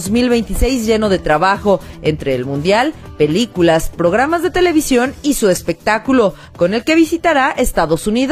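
At 0.41 s there's a single sharp click, the kind you get from dropped samples. The likely cause is a tiny handful of samples going missing from the stream, a fraction of a millisecond's worth, so the waveform jumps straight from one value to a later one instead of moving smoothly. That gap is far too short to take any sound away. What you hear is just the step itself, a quick tick, and on a spectrogram it shows as one thin vertical line.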